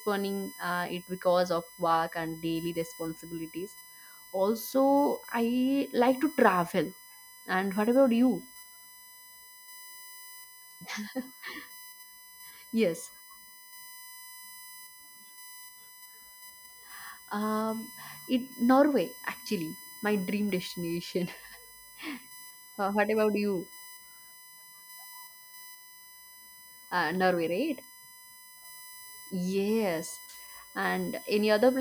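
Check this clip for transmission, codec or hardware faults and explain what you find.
One hardware fault runs through the whole clip: USB whine. A steady, fixed-pitch tone sits under the speech from start to finish. Its fundamental is at 1 kHz, and its strongest component is the harmonic at 2 kHz. It sits roughly 20 dB below the speech. The 1 kHz spacing matches the bus's 1 ms frame rate. Current drawn in each frame leaks into the audio through shared power or ground.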